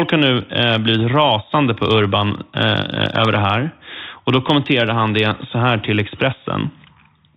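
Nothing goes wrong in this speech at any point; the only thing to notice is the narrow telephone band of G.711 coding, which cuts everything above 4 kHz and is simply how that path sounds.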